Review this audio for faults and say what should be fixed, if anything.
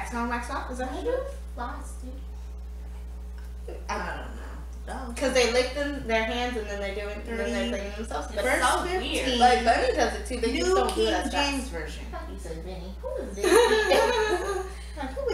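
Mains hum at 60 Hz runs through the whole recording, sitting only roughly 10 dB below the wanted signal, loud enough to be obvious. A ground loop or nearby transformer is injecting the power-line frequency into the signal path. Fix it with a single-point ground or isolation transformer on unbalanced connections, and keep cables away from power supplies.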